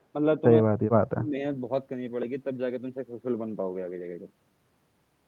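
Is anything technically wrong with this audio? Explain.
Yes. From 0.61 to 1.38 s the speech dips sharply, by about 40 dB at its deepest, and breaks up through most of that span. This is speech suppressed in double talk, likely an echo canceller attenuating the near talker while both ends spoke at once.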